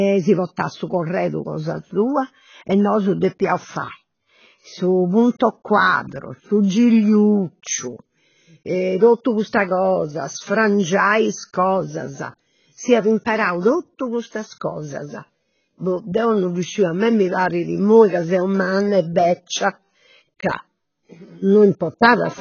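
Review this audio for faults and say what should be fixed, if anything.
The speech runs dull and smeared from start to finish, with nothing above 6.6 kHz and a warbling, fizzy texture on sustained vowels and sibilants. The likely cause is heavy AAC compression at a very low bitrate, which fits about 16 kbps AAC-LC: the encoder drops the top band and leaves holes between the remaining frequency lines. A plain low-pass filter would cut the treble just as cleanly but leave the remaining sound steady, without this swirling texture. To prevent it, keep the audio uncompressed through editing and export at a much higher bitrate.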